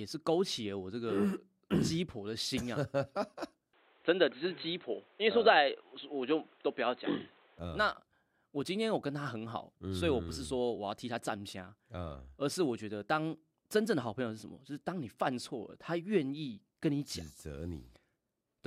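In this speech recording, the input likely switched to a poorer device from 3.73 to 7.59 s, cutting everything above 4.1 kHz, so the sound turns dull, with faint new background noise and no gap.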